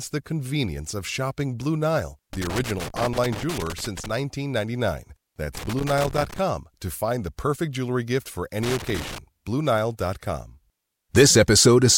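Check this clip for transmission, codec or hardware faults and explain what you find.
Loose connector crackle appears three times in the speech, from 2.33 to 4.10 s, 5.55 to 6.39 s and 8.63 to 9.18 s. A worn contact chops the signal, producing irregular scratchy bursts rather than evenly spaced digital clicks.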